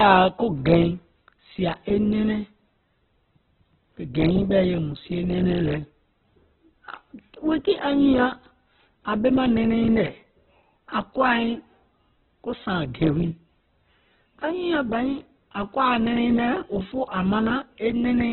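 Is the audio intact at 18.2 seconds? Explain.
No. At 18.2 seconds the speech still carries the heavy damage that runs through the whole clip, most likely from Opus compression at a very low bitrate, around 8 kbps. Starved of bits, the codec keeps each band's energy but fills the detail with folded or noise content, so the voice sounds rough, grainy and narrowband. A spectrogram shows nothing above 4.2 kHz and speckled, noise-textured bands beneath that ceiling.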